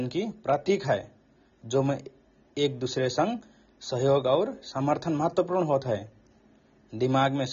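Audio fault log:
Throughout: AAC compression, likely AAC-LC near 24 kbps; nothing above 7.2 kHz, so speech sounds dull and smeared, with a warbling, fizzy texture on sibilants.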